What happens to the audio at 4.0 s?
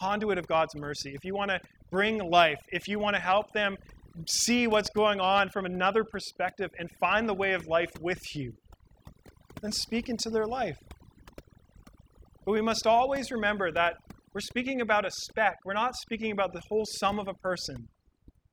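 At 4.0 s the speech is affected by overdone noise removal, which runs throughout the clip rather than starting or stopping there. A noise reduction stage set far too aggressively is pulling individual frequency bands down or out entirely whenever they sit close to its noise estimate, and the quieter parts of the speech are removed along with the noise. The background drops and breaks up into twinkling, warbling specks.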